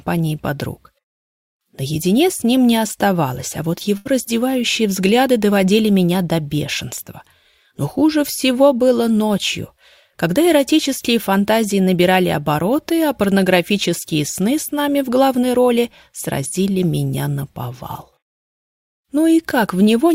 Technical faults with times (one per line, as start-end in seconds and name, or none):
3.97-4.07 burst of packet loss